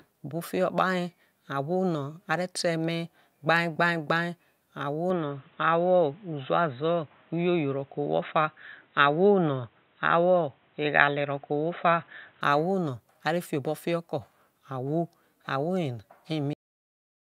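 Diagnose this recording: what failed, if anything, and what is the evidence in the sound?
From 5.10 s to 12.41 s the speech turns dull and boxy, with nothing above 3.9 kHz. It switches over and back with no gap and no jump in level, but a faint new background noise appears, well below the voice. The likely cause is the input switched to a poorer device, at the driver stage, such as a headset's call profile. A codec falling back to a lower bandwidth would narrow the band but would not bring its own noise floor, and that new floor points to different hardware.

At 16.53 s the sound stops mid-sound and drops straight to digital silence with no decay, which lasts to the end of the file. This is a cut-off end. The final buffers were never flushed to storage when recording stopped, so the waveform is truncated rather than faded. A deliberate fade or natural pause would show a tail of room sound or noise before silence. 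Here the noise floor itself vanishes instantly, which marks a buffer or storage failure.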